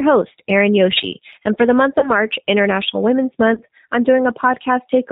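Right from the start it's G.729 codec coding, the 8 kbit/s kind: nothing above 4 kHz, and the speech sounds plainly rough and slightly synthetic throughout. At 1.99 to 2.12 s and again at 3.54 to 3.62 s there's VoIP packet loss concealed by the speech codec: the decoder stretches its last frame into a fading buzzy tone or coloured noise, which fits a single lost 30 ms packet, and the speech stays weak briefly after.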